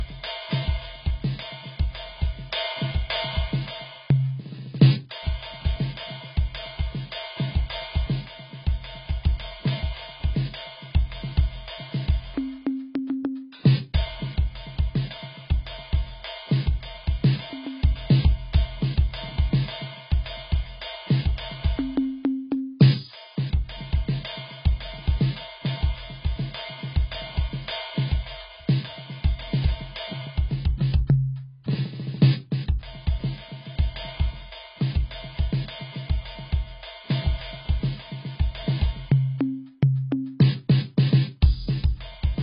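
Throughout, the music has nothing above 5.2 kHz despite the high-bitrate MP3: likely low-bitrate audio saved at a high bitrate, keeping an earlier encoding's cut-off.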